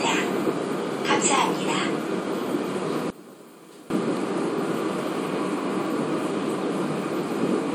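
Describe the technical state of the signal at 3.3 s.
At 3.3 s the sound is inside a sudden dip that runs from 3.10 s to 3.90 s. The level falls by about 19 dB and the sound turns faint. The centre and low end nearly vanish. What survives is a faint trace of whatever differed between the two sides. The likely cause is one channel inverted. With one side's polarity reversed, the shared content cancels when the channels are summed to mono, leaving only their difference.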